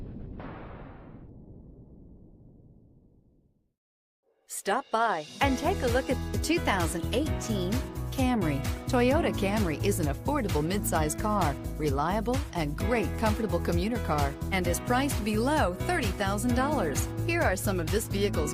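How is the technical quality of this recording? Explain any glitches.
Nothing stood out on listening to this recording.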